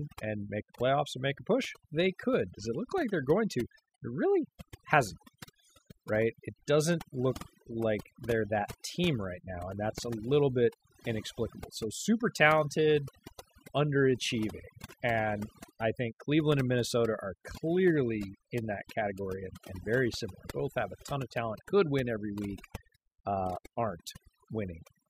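Throughout the speech, the background drops and breaks up into twinkling specks: overdone noise removal, cutting quiet speech bands along with the noise.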